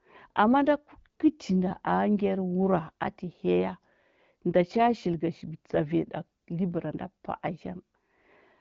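Listening to this speech recording, carried over an AMR wideband (HD Voice) link at 12.65 kbit/s, nothing stood out as a technical problem.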